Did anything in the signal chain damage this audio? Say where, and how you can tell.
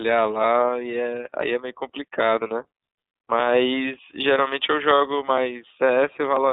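Yes. The codec stage has imposed iLBC coding on the whole clip. The speech is confined to roughly 250 Hz to 3.7 kHz and sounds plainly rough and synthetic. Each 30 ms frame's excitation is coded independently, which fits the 13.33 kbps iLBC mode.

At the network stage there are lost iLBC frames from 4.99 s to 5.01 s. The decoder fills the hole by repeating the last pitch cycle with added noise, heard as a brief buzzy held vowel. The short gap points to a single lost 30 ms frame, and the speech recovers immediately.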